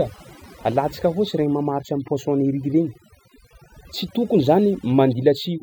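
Overdone noise removal runs through the whole speech clip: a denoiser set too hard pulls individual frequency bands down wherever they sit near its noise estimate, leaving near-silent gaps with twinkling specks, unlike a gate's clean full-band cut.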